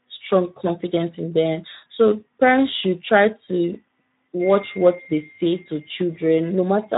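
Throughout this speech clip the voice sounds hoarse and grainy, with a coarse noisy edge on every syllable. This is Speex codec damage: the CELP coder has too few bits for the excitation signal, which fits a low setting around 11 kbps.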